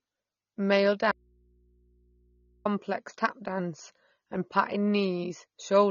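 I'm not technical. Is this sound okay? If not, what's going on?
No. From 1.12 to 2.65 s the speech vanishes for about 1.5 seconds, leaving only a low mains hum. This is likely an audio dropout to a faint residue, not a natural pause, because it cuts in and out abruptly. Throughout, the speech sounds dull, with a warbling, fizzy edge on hissy sounds, likely from heavy AAC compression. A poor microphone would sound muffled without that swirling texture.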